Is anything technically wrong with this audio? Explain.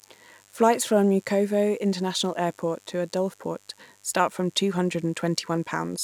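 Yes. Mains buzz runs through the whole speech clip. Sharp switching spikes at twice the 50 Hz mains rate leak into the signal, producing a steady, raspy buzz roughly 35 dB below the speech. A spectrogram shows evenly spaced horizontal lines at 50 Hz multiples reaching several kHz, and the waveform shows spikes every 10 ms.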